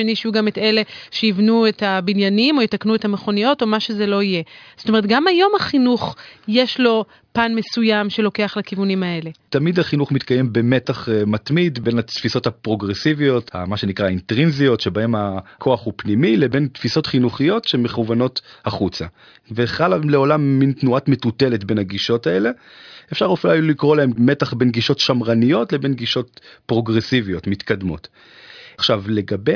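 Speech recording, no technical faults detected anywhere in the clip.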